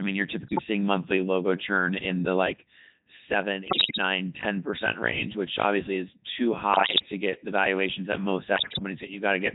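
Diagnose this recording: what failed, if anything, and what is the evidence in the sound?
Codec 2 vocoder, throughout the speech, at the codec stage. The whole clip has a robotic, buzzy quality with heavy damage, consistent with Codec 2 running at 3.2 kbit/s. This vocoder does not keep the waveform. It sends only pitch, voicing, energy and a coarse spectral envelope for each frame, and the decoder rebuilds the voice from a bank of sine waves. Natural texture and breathiness are therefore replaced by a synthetic, harmonic buzz.

Bit errors on digital voice radio, in the channel or network stage, appear in four bursts: 0.48–0.64 s, after "mean you're" and before "monthly logo churn in"; 3.68–3.98 s; 6.74–7.06 s, after "which obviously is too" and before "get the valuations that"; and 8.56–8.83 s, after "the valuations that most". In each burst, pitch, level and tone colour jump abruptly into bleeps and warbling gibberish. 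Corrupted bits, at an error rate of roughly 5 to 10 percent, scramble the vocoder's frame parameters.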